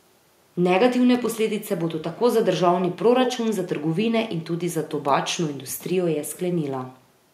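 A short, irregular burst of crackling and scratching cuts into the speech from about 1.14 to 1.29 s, lasting roughly 0.14 s. That is loose connector crackle: a worn or dirty contact briefly making and breaking, chopping the signal into ragged fragments.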